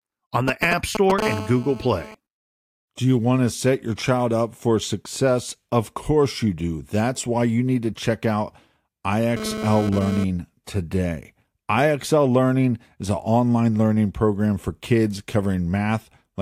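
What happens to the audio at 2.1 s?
At 2.1 s the GSM phone buzz is ending. It runs from 1.22 to 2.15 s, a harsh 217 Hz rasp about 10 dB below the speech. A nearby phone's call bursts are being rectified by the audio circuit, which makes the sound grittier and more harmonic-rich than mains hum.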